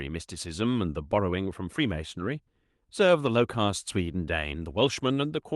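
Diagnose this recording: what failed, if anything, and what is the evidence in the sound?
Nothing failed here: the speech comes through just as a normal call path should, with the top end easing off around 12 kHz in a way that fits Opus running at about 32 kbps, and no stage of the chain shows any trouble.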